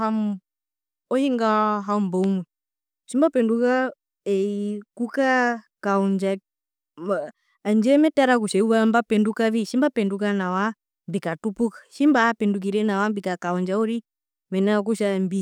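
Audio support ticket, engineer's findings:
Loud pop, 2.24–2.26 s: a single sharp pop a few dB above the speech, which continues underneath. Likely a plug, switch or static discharge injecting a brief voltage step, shaped into a short pulse by downstream circuitry.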